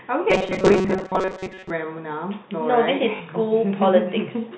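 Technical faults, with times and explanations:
0.30 to 1.70 s: robotic sound from repeated short buffers. The speech becomes a rigid metallic buzz locked at about 188 Hz, which fits a repeat length near 5.3 ms. Roughly 70% of the time is filled with repeats while fresh audio is skipped, likely because new audio arrived too seldom.
3.16 s to 3.20 s: packet loss with last packet repeated. A 40 ms gap, consistent with two lost packets of 20 ms, is filled by replaying the previous packet. The repeat misaligns with the speech pitch, giving a brief robotic stutter.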